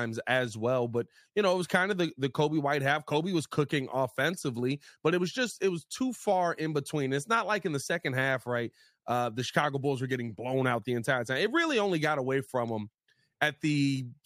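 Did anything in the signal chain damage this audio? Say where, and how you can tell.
No, nothing stood out on listening to this speech recording that would point to damage at any stage of the chain.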